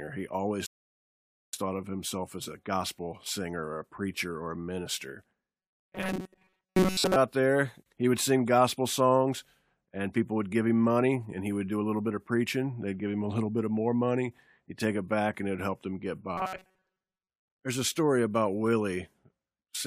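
At 0.66 s the speech cuts to silence in a rebuffering stall: playback ran out of downloaded audio and waited for more. It resumes at 1.53 s exactly where it stopped, on "thought of himself as", losing nothing but adding 0.87 s.

Robotic sound from repeated short buffers appears from 5.59 to 7.16 s, after "preacher or a minister" and before "there he would sing", and again from 16.38 to 17.30 s, after "it helped him get". The speech becomes a rigid metallic buzz at 188 Hz that still roughly tracks the words. The likely cause is that new audio arrived too seldom, so the last short buffer was repeated and most of the real signal was skipped. A 188 Hz buzz fits a buffer of about 5.3 ms.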